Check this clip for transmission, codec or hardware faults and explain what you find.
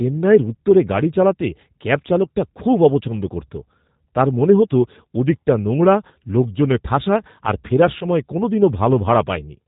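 Two things stand out: the whole clip has been through a low-rate speech codec, and there's one short dropout near the end that the decoder papered over.

Throughout, this sounds like G.729 coding, and the damage is plainly audible. The codec rebuilds the voice from a vocal tract model, a pitch predictor and a handful of pulses per frame, rather than sending the waveform. So you get that slightly rough, synthetic edge, with nothing above 4 kHz. The character fits an 8 kbit/s G.729A link.

From about 7.99 to 8.04 s, right after "লোকজনে ঠাসা আর ফেরার", you can hear VoIP packet loss concealed by the speech codec. Roughly 20 ms of audio is missing, consistent with a single lost packet. Instead of leaving silence, the decoder stretched its last pitch and filter settings and turned the gain down. That gap comes out as a brief stretched patch that fades, and the voice sounds weak or distorted just after it while the decoder's state catches up.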